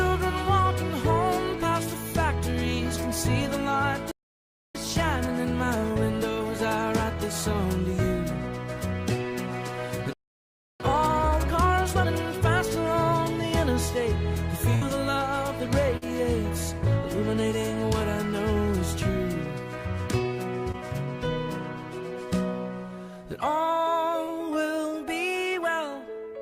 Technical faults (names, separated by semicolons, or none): playback stall; time-compressed catch-up; burst of packet loss; short concealed packet loss